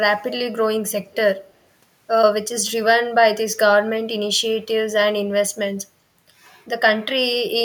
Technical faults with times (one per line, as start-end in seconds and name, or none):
1.11-1.15 echo leak